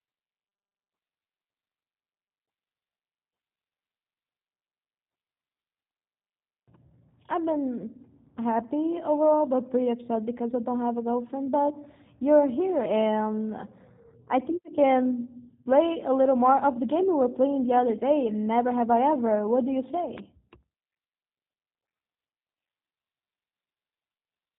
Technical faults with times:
0.00-24.58 G.729 codec
20.18-20.20 loud pop

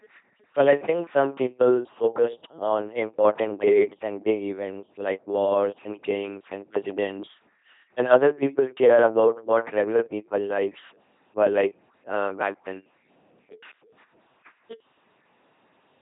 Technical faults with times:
0.00-16.01 LPC-10 vocoder

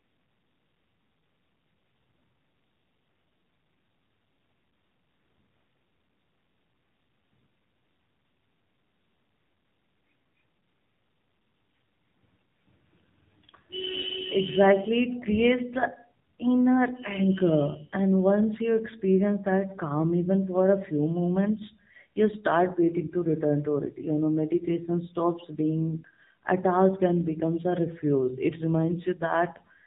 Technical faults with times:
0.00-29.86 AMR narrowband mobile codec

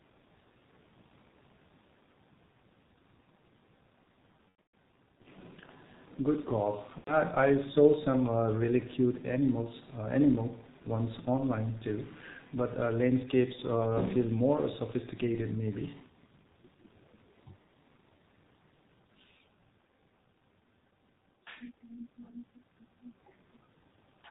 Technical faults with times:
0.00-24.30 G.723.1 codec
4.49-4.72 VoIP packet loss concealed by the speech codec
6.98-7.16 VoIP packet loss concealed by the speech codec

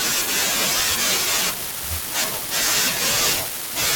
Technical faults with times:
0.49 dropped buffer (overrun)
2.24 dropped buffer (overrun)

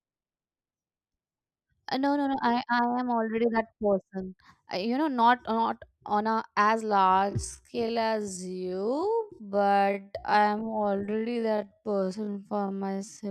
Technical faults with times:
6.85-13.31 time-stretched section

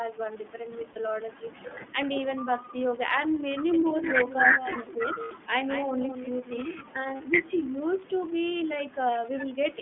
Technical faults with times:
0.00-9.81 iLBC codec
0.92-0.97 lost iLBC frames
4.52-5.03 speech suppressed in double talk
4.86-4.97 echo leak
5.24-5.32 lost iLBC frames
7.17-7.21 lost iLBC frames
7.63-7.72 echo leak

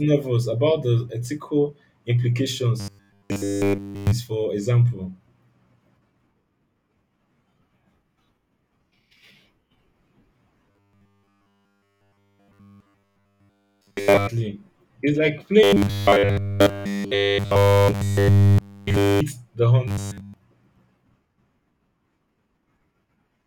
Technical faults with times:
2.80-4.12 robotic sound from repeated short buffers
10.71-14.27 robotic sound from repeated short buffers
15.63-19.20 robotic sound from repeated short buffers
19.88-20.34 robotic sound from repeated short buffers

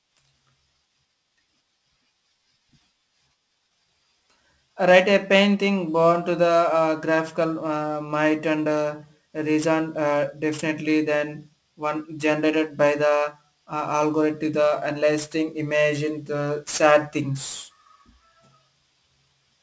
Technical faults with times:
0.00-19.62 aliasing

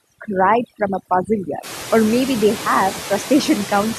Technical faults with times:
0.00-3.99 overdone noise removal
0.00-3.99 noise suppressor artifacts

